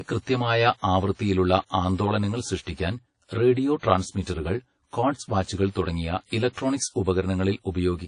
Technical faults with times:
0.00-8.07 channel delay (comb filtering)
0.00-8.07 WMA compression
2.62-2.67 pre-echo

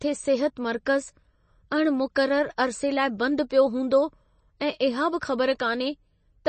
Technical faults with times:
0.00-6.48 MP3 compression

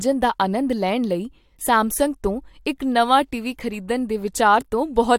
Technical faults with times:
none

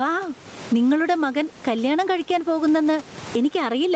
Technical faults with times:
0.00-3.96 gain pumping

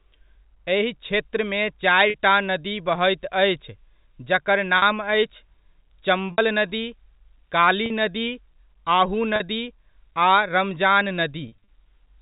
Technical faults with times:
2.10-2.14 packet loss with pitch repetition
4.78-4.82 packet loss with pitch repetition
6.32-6.38 packet loss with pitch repetition
7.86-7.90 packet loss with pitch repetition
9.36-9.40 packet loss with pitch repetition
11.48-11.67 packet loss with pitch repetition

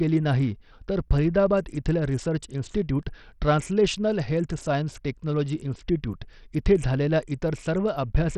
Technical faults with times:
0.00-8.38 Bluetooth SBC compression

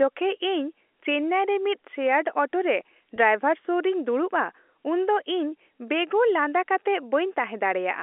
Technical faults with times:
3.16-3.18 packet loss with pitch repetition

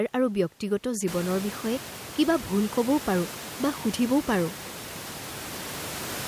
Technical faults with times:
none

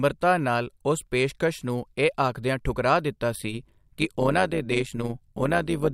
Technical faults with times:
3.33-5.93 overlap-add ripple

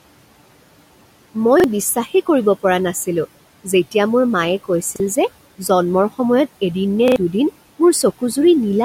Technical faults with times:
0.00-8.85 noise suppressor artifacts
1.60-1.64 repeated buffer
4.96-5.00 repeated buffer
7.08-7.16 repeated buffer

